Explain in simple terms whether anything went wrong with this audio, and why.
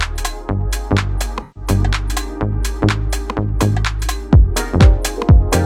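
Something went wrong from 1.42 to 1.69 s. That stretch sounds smeared and noisy. This is AAC frame loss with concealment. A few chunks of data went missing. The decoder guessed the gap from the last good sound, which blurs it.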